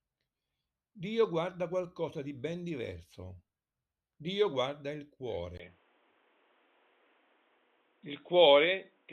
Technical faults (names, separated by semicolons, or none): input switched to a poorer device